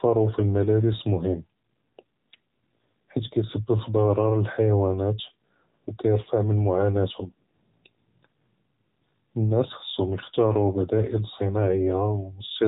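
AMR narrowband mobile codec damage runs through the whole speech clip. The sound has been squeezed into the 8 kHz-sampled AMR-NB format and rebuilt from a vocal-tract model fed by sparse pulses, and at a low rate of about 7.95 kbps that model can only approximate the signal. Nothing above about 3.8 kHz survives, so sibilants and air are gone, and the reconstruction sounds plainly buzzy and synthetic, with a telephone-like thinness throughout.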